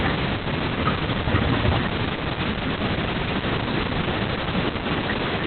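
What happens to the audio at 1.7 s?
At 1.7 s you're hearing Opus voice compression, which runs through the whole clip. Nothing survives above 4.3 kHz, and the coarse excitation coding leaves the speech muffled, hoarse and slightly robotic. It all points to narrowband SILK at roughly 8 kbps.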